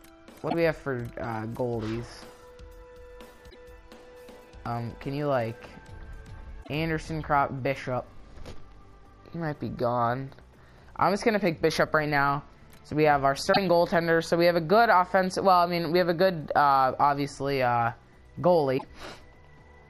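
At 0.46 s, 3.46 s, 6.60 s, 13.49 s and 18.74 s the audio is briefly disrupted, each event lasting about 80 to 95 ms. This is damaged data in a compressed stream: the decoder meets corrupted bytes, misreads those frames and loses sync until it finds the next valid frame header. Each event is heard as a short chirp, squawk, click or hole.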